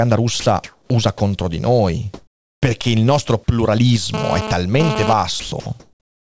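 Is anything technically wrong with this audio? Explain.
Yes, there are three kinds of fault.

Sound dropped by the voice detector occurs at 0.40–0.46 s, at 1.18–1.20 s just before "di noi perché il", at 5.40–5.52 s and at 5.60–5.66 s. Speech cuts out briefly and is replaced by steady hiss, most likely because the sender's detector took the speech for background and stopped transmitting. Unlike a packet loss concealment glitch, the gap holds flat noise rather than a smeared repeat.

Comfort noise in place of the background appears at 0.64–0.90 s, at 2.14–2.62 s between "di noi" and "perché il nostro", and at 5.80 s to the end. In these pauses the real room tone gives way to smooth, featureless synthetic noise, likely from discontinuous transmission. The level steps by about 8, 14 and 3 dB respectively. It differs from a dropout because no speech is lost.

GSM phone buzz runs from 4.14 to 5.13 s, a hard, raspy 217 Hz buzz rich in harmonics at about 5 dB below the speech. 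A nearby 2G phone's transmission bursts are being rectified by the audio circuitry. The buzz comes and goes in a way that fits a data transfer, and its fixed pitch, unrelated to the speech, sets it apart from mains hum.

The call codec leaves nothing above 8 kHz.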